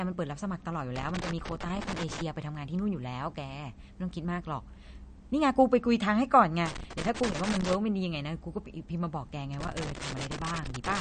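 Throughout, the speech has a hard treble ceiling at 9.1 kHz with watery, swirling artefacts, likely MP3 compression at a low bitrate around 40 kbps. Loose connector crackle, irregular scratchy bursts from an intermittent contact chopping the signal, occurs from 0.96 to 2.21 s, 6.66 to 7.75 s, and 9.54 s to the end.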